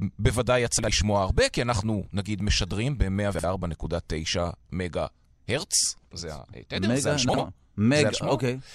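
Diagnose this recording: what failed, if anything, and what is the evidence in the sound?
Chunks out of order at the driver or buffer stage: at 0.79–0.88 s, 3.34–3.44 s and 7.29–7.38 s, two adjacent 46 ms blocks swap places. Unlike a dropout, no audio goes missing. The result is a brief jumble with three hard joins.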